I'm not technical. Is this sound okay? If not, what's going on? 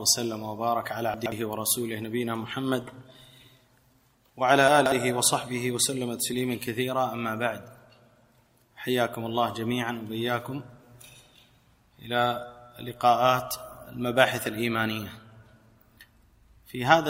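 No, not quite. There are two short glitches, from 1.14 to 1.32 seconds and from 4.68 to 4.92 seconds, where the sound briefly jumbles. That's chunks out of order: the audio travels in tiny 60-millisecond pieces, and one piece turned up late, playing two pieces after its proper spot the first time and three the second. Nothing goes missing, but the order is wrong.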